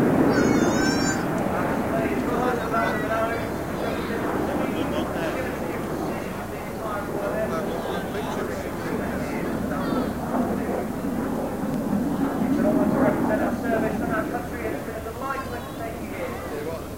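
A short click or stutter interrupts the sound at 2.72, 5.73, 8.73 and 11.74 seconds, evenly spaced about 3 seconds apart. These are overlapping chunks: the audio was handled in 3-second blocks, and each new block began about 7 ms before the previous one finished. At every join, that 7 ms sliver plays twice, and the repeated fragment produces the regular tick heard at each boundary.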